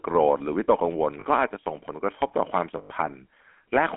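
From the start the speech carries the GSM full-rate codec's signature: a buzzy, gravelly roughness layered over every syllable, with nothing above about 3.4 kHz. That grit comes from the coder rebuilding the voice from a vocal-tract model driven by a thinned pulse excitation, which fits the 13 kbps full-rate coder. Plain telephone band-limiting would sound muffled but smooth. Here the texture itself is coarse, and that roughness is what sets it apart.

At 1.20 to 1.25 s there are lost GSM frames. For about 40 ms, roughly two frames, the decoder repeats the last good frame, so the sound freezes into a short metallic ring. The same thing happens for longer at 2.78 to 2.91 s, where about six frames over 120 ms ring. A simple dropout would leave a silent gap or a click. Here the held, tinny tone bridges the missing audio, which is how this fault differs from one.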